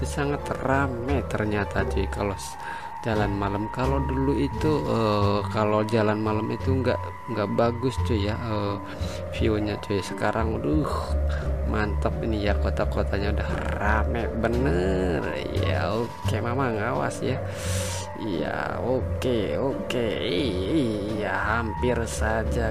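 No faults to log: no dropouts, level jumps, distortion or timing breaks anywhere in the recording.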